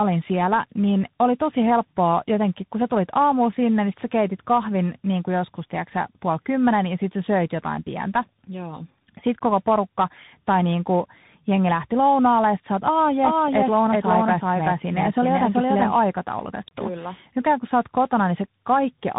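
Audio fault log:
Throughout: tandem speech coding, the speech passing through AMR-NB, then G.711 A-law, then CVSD, each recoding the last one's damage, so it's rough, muffled and warbly with nothing above 3.8 kHz.
13.23 to 15.95 s: doubled audio track, a full-band copy trailing by roughly 400 ms at about the same level, dry and cutting in and out abruptly, likely a second capture path or an edit overlap.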